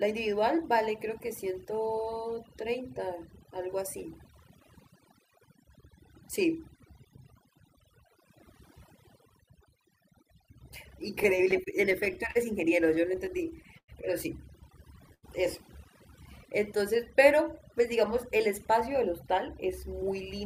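Overdone noise removal runs throughout: an overly aggressive noise reducer pulls bands near its noise estimate down, leaving a lowered, twinkling background.

Repeated stalls (stutter) occur from 11.23 to 12.37 s and from 12.87 to 13.9 s. Late packets kept emptying the jitter buffer, so the receiver stretched the last sound across eight gaps in each stretch. The gaps total 117 ms in the first, with the longest 42 ms, and 162 ms in the second, with the longest 101 ms. The speech drags and stutters, but nothing is lost.

A short stall from a late packet at 15.14 s holds the sound for 86 ms until the packet arrives, then playback resumes from the same point.

Jitter buffer speed-up runs from 18.48 s to the end. The receiver trims surplus buffered audio, around 70 ms in total, in pitch-period pieces, so speech runs about 4% faster at the same pitch.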